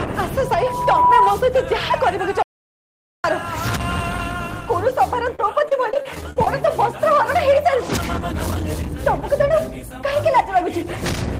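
From 0.39 s to 1.44 s there is loudspeaker feedback squeal. A microphone is hearing the loudspeaker it drives. At 983 Hz the loop gain has passed one, so that tone feeds itself. It swells over about 0.7 s into a steady whistle. At its peak it sits about 5 dB above the rest of the sound. It stops at 1.44 s.

From 2.43 s to 3.24 s the audio drops out to silence. The sound cuts off abruptly and returns just as abruptly. The gap lasts 0.81 s. It is digital silence, with no room tone underneath. That points to lost input, likely a disconnected device, a failed link or a brief mute, while the recorder kept writing silence. Whatever happened in that gap is gone.

From 5.35 s to 6.47 s there is repeated packet loss, heard as robotic sound. The audio keeps breaking into short holes, one after another. Each hole is patched by stretching the last fragment of sound, so the texture turns choppy. No single gap exceeds 32 ms. 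Together they add up to about 0.2 s of patched sound, roughly a fifth of the stretch. That density is what makes it sound mechanical rather than merely clipped.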